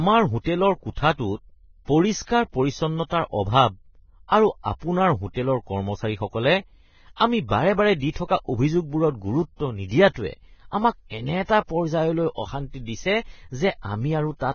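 Speech, with heavy coding damage across the whole clip. Nothing is present above about 6.6 kHz, and the treble below that cut-off is rough and hissy, with grainy sibilants and smeared consonant onsets. This matches Vorbis compression at a very low rate, likely around 16 kbps. The encoder drops the band limit and quantises the remaining high residue so coarsely that fine detail turns into noise of similar energy.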